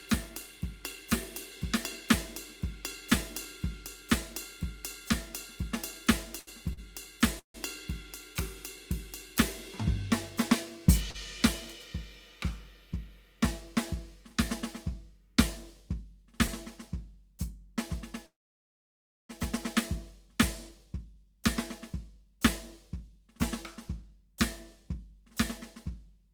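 At 6.39 s the music briefly hangs in a short stall from a late packet. The last sound is held for about 78 ms with a faint buzzy edge until 6.49 s, then carries on from the same point with nothing lost. A second stall follows at 6.73 s, holding for 41 ms until 6.79 s. In both cases the jitter buffer ran dry while a packet was overdue, so the receiver extended what it already had.

At 7.39 s there is a call audio freeze. The final sound is drawn out and fades, and about 110 ms of silence follows before the music resumes at 7.56 s, with roughly 149 ms inserted in total and nothing skipped. This is likely packets delayed in transit, which emptied the buffer.

Another short stall from a late packet at 11.10 s stretches the sound by 40 ms, to 11.16 s.

A much longer call audio freeze runs from 18.26 to 19.31 s. The held sound decays to about 990 ms of silence, and the music then picks up exactly where it stopped, about 1 s later than it should.

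From 20.33 s to 26.33 s there is a jitter buffer speed-up. Playback runs at about 102% with the pitch unchanged, because the receiver trims many tiny pitch-period slices to work off a backlog in the buffer. Across this stretch it removes roughly a tenth of a second in total. The tempo pushes slightly ahead, and the groove loses its steadiness.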